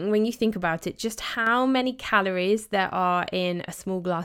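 From 1.35 to 1.47 s, after "think about it just", the speech abruptly dips by about 6 dB, likely one channel drops out before the mono sum.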